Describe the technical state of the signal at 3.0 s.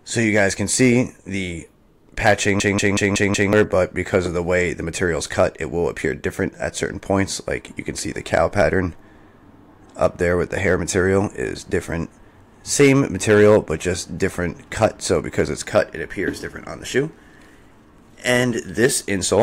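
At 3.0 s the signal is inside a system hang loop running from 2.60 to 3.53 s. The host stalled while the audio hardware kept replaying its ring buffer, so one segment of about 186 ms repeats five times at roughly 5.4 Hz, which fits an 8192-sample buffer. At that length the result is a hard, machine-gun-like stutter rather than a buzz, and about a second of the real audio never reaches the output.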